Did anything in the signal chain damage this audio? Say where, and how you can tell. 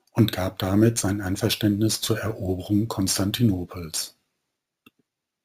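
Yes. The damage is at a sample-rate conversion stage, and it runs through the whole clip. It is imaging from sample-and-hold upsampling. A metallic fizz between 8 and 16 kHz, about 15 dB below the speech, tracks its level and mirrors its pitch inversely. That points to 16 kHz audio raised to 44.1 kHz by repeating samples with no smoothing filter.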